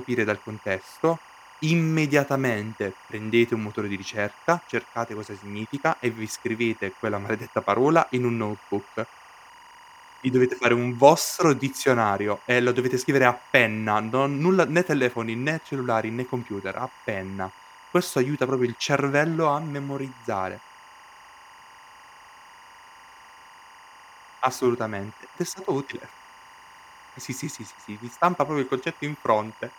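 Timecode bleed runs throughout the speech. Linear timecode at 24 frames per second leaks in, chirping between roughly 1 and 2 kHz, well below the voice.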